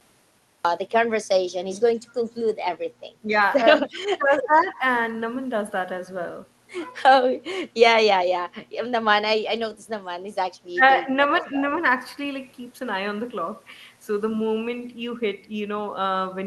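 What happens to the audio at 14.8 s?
Nothing goes wrong at 14.8 s: the speech there comes through intact, carrying only the ordinary coding character of a call path whose top end stops around 12 kHz.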